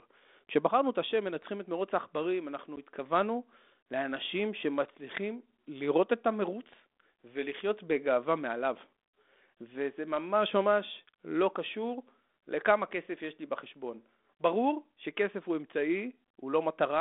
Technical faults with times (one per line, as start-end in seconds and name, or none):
2.76 packet loss on an ADPCM call